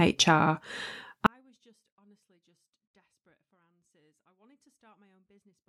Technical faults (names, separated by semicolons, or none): 24-bit alignment error (too quiet)